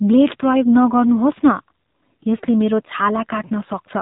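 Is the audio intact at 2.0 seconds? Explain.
No. At 2.0 seconds, as everywhere else in this speech clip, the sound is dull and boxed-in, with nothing above 4 kHz and a plainly audible buzzy, synthetic edge. This is the AMR narrowband mobile codec (AMR-NB) throughout: it samples at 8 kHz and rebuilds the voice from a vocal-tract model excited by a few pulses per 5 ms subframe. The degree of roughness fits a low setting of about 7.4 kbps.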